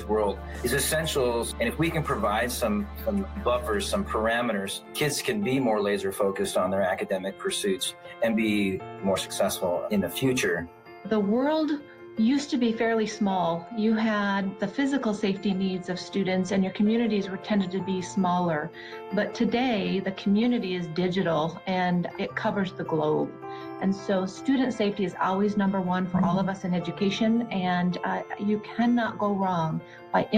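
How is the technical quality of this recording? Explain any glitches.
Nothing in this recording comes across as a glitch, so there's nothing here that needs explaining.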